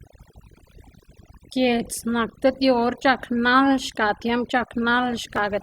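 From start to finish the speech carries overdone noise removal. A noise reduction stage was driven too hard, so any frequency band sitting close to its noise estimate gets pulled far down or switched off entirely, and low-level parts of the speech are removed along with the noise. Between phrases the floor drops to near silence dotted with brief tonal sparkles.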